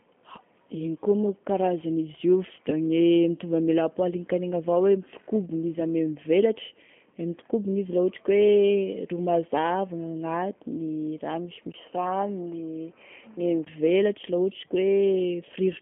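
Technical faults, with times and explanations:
Throughout, G.729 codec: the speech has the rough, slightly synthetic texture of a low-rate VoIP codec, consistent with G.729A at 8 kbit/s. Each short frame is rebuilt from a vocal tract filter, a pitch predictor and a few coded pulses, not from the actual waveform. That modelling leaves plainly audible graininess on the speech. The line passes roughly 150 Hz to 3.4 kHz, with nothing above 3.5 kHz, so sibilants and airiness are missing.
11.72 to 13.67 s, input switched to a poorer device: after a 20 ms gap the sound turns duller and boxier. The top of the band drops further, with nothing above 3.1 kHz, and a faint new background noise appears, far below the speech. Loudness stays about the same. This is likely the system switching to another microphone or a headset's call profile, whose narrower band and different tone replace the original input until 13.67 s.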